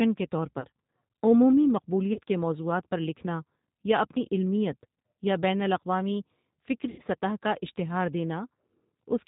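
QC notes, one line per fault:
Throughout: G.729 codec. The speech is carried at 8 kbit/s in a form that fits G.729A. The decoder rebuilds each 10 ms frame from a vocal tract filter, a pitch predictor and a sparse set of pulses, and it passes nothing above 4 kHz. The result stays intelligible but is plainly rough and synthetic, with a dull top end.
0.60 to 0.65 s, 2.13 to 2.18 s, 6.89 to 7.01 s: VoIP packet loss concealed by the speech codec. Audio goes missing for about 40 ms, 30 ms and 90 ms, and the decoder fills each gap by extending its last pitch and filter state at falling gain. The voice smears into a fading buzzy tone or coloured noise, longest at 6.89 s. Because each frame builds on the previous one, the speech resuming at "کے موضوعات پر لکھنا" and "سطح کا اشتہار" sounds weak or distorted before it recovers.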